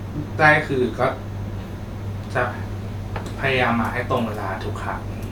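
No technical fault can be heard anywhere in the recording, and the signal holds steady throughout.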